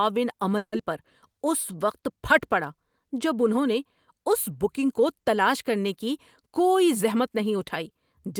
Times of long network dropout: 0.57-0.81

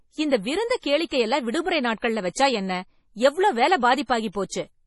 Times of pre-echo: 0.80-0.83, 1.08-1.11, 2.00-2.02, 4.06-4.35

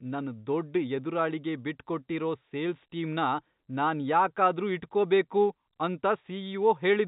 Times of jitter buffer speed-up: none

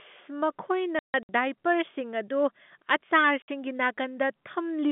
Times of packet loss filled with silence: 0.99-1.29, 3.42-3.48

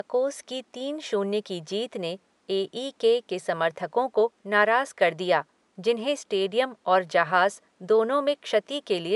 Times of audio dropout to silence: none

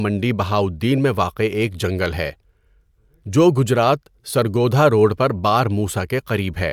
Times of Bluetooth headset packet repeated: none

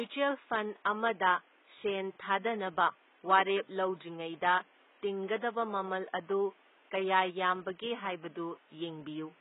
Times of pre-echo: none

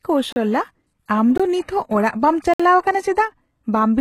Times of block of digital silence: 0.32-0.36, 1.38-1.40, 2.54-2.60

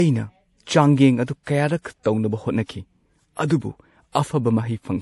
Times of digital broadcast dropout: none

